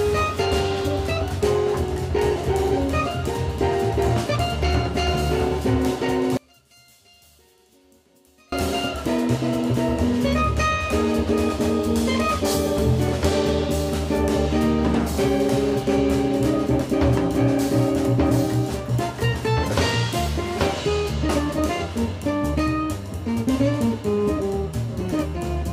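From 6.37 to 8.52 s the sound drops about 32 dB to a residue, likely one channel inverted cancelling in the mono sum; unlike a dropout, something remains.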